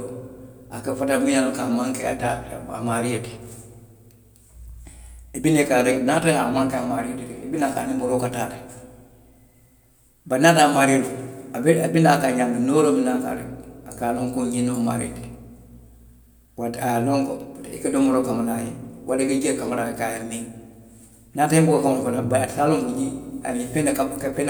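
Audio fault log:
No faults heard; the speech runs without dropouts, clicks, distortion or level problems.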